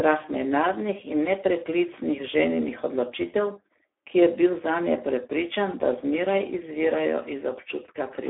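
Speex codec damage runs throughout: heavy low-bitrate coding, which fits 8 kbps, makes the speech noisy and hoarse. The band is about 300 Hz to 3.5 kHz, with nothing above 3.8 kHz.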